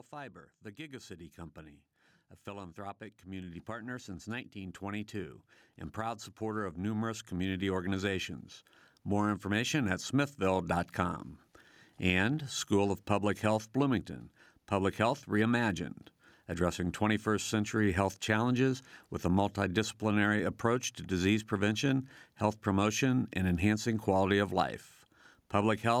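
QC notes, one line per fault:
2.45–5.45 s and 5.97–8.34 s, automatic gain rising: right after "company a", the voice and the room noise behind it swell together, climbing about 6 dB over three seconds. After a brief pause they rise again by about 5 dB over roughly 2.4 seconds. The automatic gain control judged the input too quiet and stepped up its gain slowly, so everything lifts at once instead of the speaker simply getting louder.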